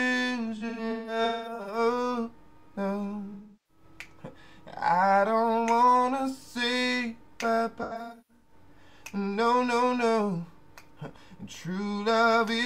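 From 0.56 to 1.78 s, 3.34 to 3.83 s and 7.82 to 8.53 s, AAC frame loss with concealment leaves smeared, phasey patches as the decoder rebuilds missing frames from the last good spectrum. Unlike plain dropouts, these gaps are filled with blurred sound, not silence.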